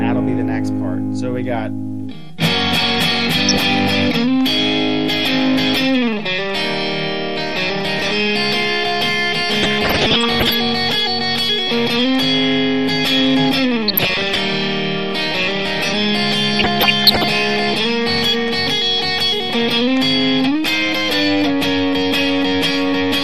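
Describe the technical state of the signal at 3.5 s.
At 3.5 s you're right in the middle of a burst of DAB burbling, running from about 3.32 to 3.60 s. Bit errors have slipped past the error correction into the MP2 data, so wrong samples put short blips of noise into single sub-bands. It comes out as a short burbling disturbance over the sound. A quarter-second burst like that fits roughly a dozen damaged frames at an error rate of around half a percent.

Underneath that, the whole passage has a dull, gurgly, granular quality, with the top end thinned and bands flickering on and off. That's most likely MP2 compression at a low rate, which fits something like 80 kbps. With so few bits, Layer II switches off upper sub-bands and quantises the remaining ones coarsely, so the codec damage is plainly audible here, just as it is across the rest of the clip.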